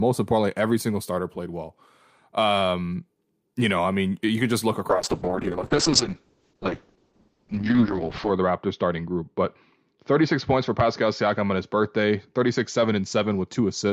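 At 4.9 s, a call bitrate drop forces coarse coding, consistent with about 6 kbps, and cuts highs above 8 kHz. Speech turns muffled and watery to the end.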